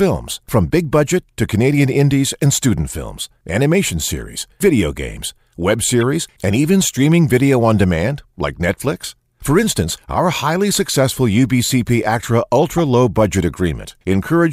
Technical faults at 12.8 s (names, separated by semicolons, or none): corrupt frame decoded